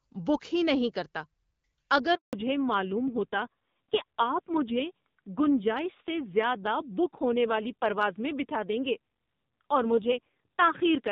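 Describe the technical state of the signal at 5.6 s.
At 5.6 s the call has fallen back to narrowband, a switch that begins at 2.33 s and runs to the end. The link drops from the wideband codec to a low-rate narrowband one, which fits AMR-NB at about 5.9 kbit/s. Nothing above 4 kHz survives, so the speech sounds muffled and rough.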